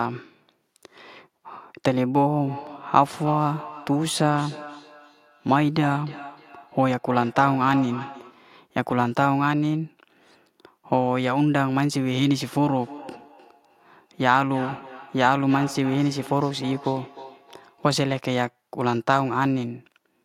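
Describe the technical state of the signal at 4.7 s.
At 4.7 s the speech sits inside a feedback echo between two devices, running from 2.45 to 8.49 s. A second device plays this microphone's audio back into it, so each word returns roughly every 300 ms, thinner and ringing, peaking about 15 dB below the speech.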